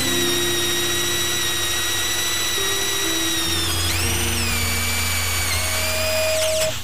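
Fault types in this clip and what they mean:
Loudspeaker feedback squeal: a steady tone near 631 Hz appears at about 5.50 s and swells over roughly three quarters of a second into a squeal that matches the loudness of the surrounding sound, holding until about 6.73 s. It arises because the microphone is hearing the loudspeaker it drives, and at that one frequency the round trip adds gain instead of losing it, so the tone feeds itself louder on every pass.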